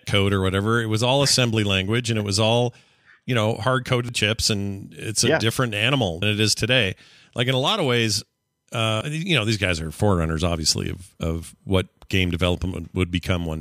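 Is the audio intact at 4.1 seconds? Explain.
No. A dropped buffer (overrun) at 4.09 s breaks the speech: about a tenth of a second is missing and the two sides butt together with a jump forward. The likely cause is that the samples weren't read before the hardware overwrote them.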